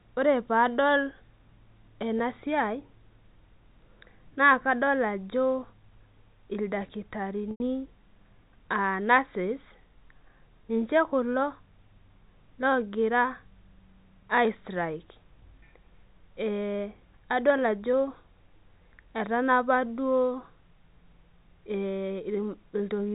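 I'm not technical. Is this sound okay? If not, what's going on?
No. There's packet loss with pitch repetition: at 2.19 s a tiny gap is covered by a brief buzzy hold, and from 7.51 to 7.60 s a longer hold fades toward silence. A plain dropout would just go quiet instead.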